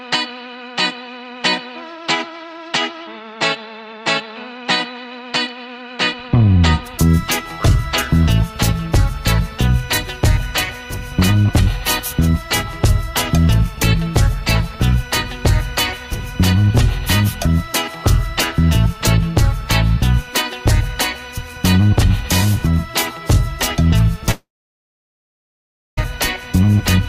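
At 24.31 s the sound smears into a fading buzz, then drops to near silence for about 1.5 s before resuming at 25.99 s with roughly 1.66 s simply gone. This is likely a long network dropout, with the receiver stretching the last sound until it ran out.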